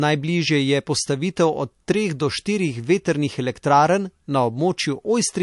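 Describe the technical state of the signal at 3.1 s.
At 3.1 s the speech carries MP3 compression damage, present across the whole clip. Nothing sounds above 11.3 kHz. Weak frequency lines flicker on and off between frames, giving a watery, swirly texture. The likely cause is a low bitrate, around 48 kbps.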